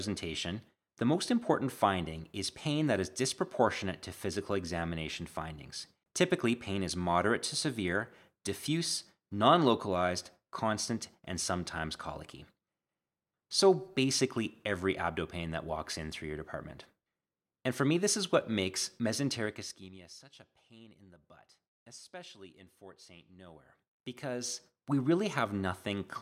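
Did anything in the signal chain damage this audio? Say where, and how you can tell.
Yes. Zipper noise from a stepped digital gain stage in the processing chain: between 19.37 and 20.14 s, after "this is what makes" and before "a pain in the", the level drops about 20 dB in 2 dB jumps. From 23.30 to 24.83 s it climbs back in 1 dB jumps. Both run at roughly ten steps per second. Each unsmoothed jump ticks, so the spectrogram shows evenly spaced thin vertical broadband lines and the waveform envelope forms a staircase.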